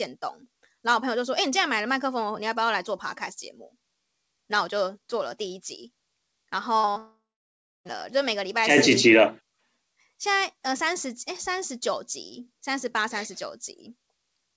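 A short concealed packet loss at 6.91 to 6.98 s opens the trouble in this speech clip, which was carried over a call path whose G.722 coding leaves nothing above 8 kHz. About 40 ms of audio failed to reach the decoder in time, so the receiver patched the gap by extending the last sound it had, briefly smearing the speech before the patch would normally hand back to real audio. No real audio follows, though. A long network dropout runs from 6.98 to 7.87 s, most likely a stretch where no packets arrived at all, losing about 0.88 s. For roughly the first fifth of a second the concealment keeps stretching the previous sound into a fading buzz or hiss. The last 0.66 s or so is silence. Speech resumes at 7.87 s with the missing portion simply gone rather than delayed.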